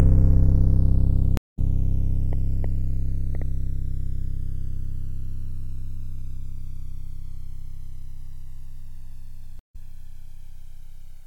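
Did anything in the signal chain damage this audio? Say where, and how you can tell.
Yes. The two channels of this music were captured on devices running from separate clocks, roughly a hundred parts per million apart, so the inter-channel delay creeps to around a millisecond and a half by the end. Heard in mono, the comb notches sweep slowly, giving a gradual flanging throughout.

The network stream dropped twice, at 1.37 to 1.59 s and 9.59 to 9.76 s. Each time the player fell silent, for 148 ms and then 97 ms, reconnected and restarted its decoder. Playback resumes about 150 ms and about 100 ms further along, so material is skipped.

Between 2.33 and 3.43 s a train of clicks, around four pulses at about 2.76 per second, spaced irregularly, pops over the music at about 5 dB above it. The matching click shapes point to likely electrical interference or a struggling interface in the analogue wiring or converter stage.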